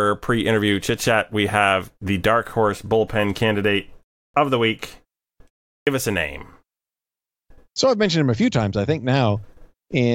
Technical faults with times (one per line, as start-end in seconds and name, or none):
4.28-4.34 clipped start after a pause
5.81-5.87 clipped start after a pause